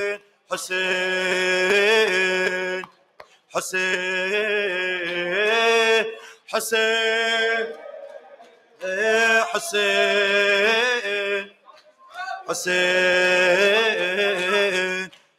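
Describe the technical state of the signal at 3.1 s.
At 3.1 s the sound is inside a stretch, from 2.81 to 3.54 s, where the sound is cut by the noise suppressor. The suppressor mistakes this passage for noise and pulls it down harder than the surrounding material, with the deepest drop reaching about 18 dB. Over roughly three-quarters of a second the level sinks and any sustained or decaying portion is clipped short, while only abrupt onsets keep much of their strength.

This dip sits within a wider problem running through the whole clip: a noise suppressor built for speech is being applied to music or other sounds. Because it treats steady tones, ambience and reverb as unwanted noise, its attenuation swings by something like 15 dB as it reacts. Attacks pass fairly cleanly but held sound and tails are pushed down, so the audio pumps, flutters and loses body around this moment.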